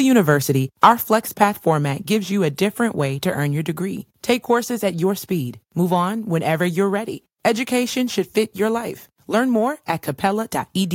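Microphone overload, from 0.83 to 0.89 s: the loudest part of the speech turns harsh and crackly for this short stretch, with a gritty edge on top of the peaks. The likely cause is an input gain set high enough that the waveform tried to swing roughly 3 dB past the converter's ceiling, so the tops of the peaks were flattened. Around one in twenty samples was cut off.

Microphone volume stepped down, at 1.02 s, just before "format gives you a": the speech and the background both drop abruptly by about 4 dB in a single step, with no gradual fade. It comes right after the distorted peak, which fits the call software likely noticing the overload and lowering the device's input volume in one move. From that point the level sits noticeably lower than in the opening second.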